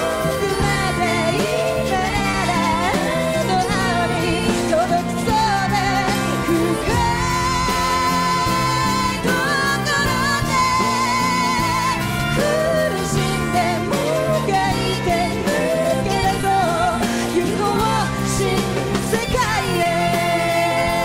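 Short concealed packet loss occurs at 2.31–2.35 s, 16.41–16.45 s and 19.83–19.87 s: 20 ms of audio went missing each time, and the decoder's concealment briefly smears or wobbles over the gap.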